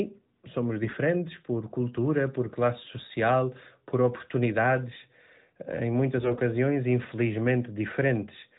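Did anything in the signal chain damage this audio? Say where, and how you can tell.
Yes. The damage happened on the radio link feeding the mobile codec, so these are AMR bit errors. From 0.84 to 0.97 s, just before "por cultura por classe", and from 6.18 to 6.40 s, just after "por oportunidades eh em", the speech keeps its pitch and level but turns hoarse and gargly. Flipped low-priority bits put the excitation pulses and fine gain and spectral values in the wrong place. Those lengths fit runs of about six and eleven 20 ms frames, with a few percent of bits corrupted.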